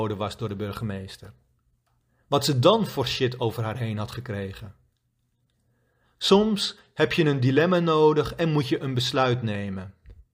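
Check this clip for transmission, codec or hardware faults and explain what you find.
Nothing stood out on listening to this speech recording.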